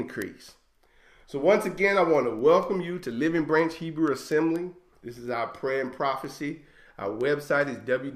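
Word clock ticks from 0.22 to 7.93 s: roughly thirty single-sample slips, about five per second, from an unlocked digital link, showing as evenly spaced full-band spectrogram lines.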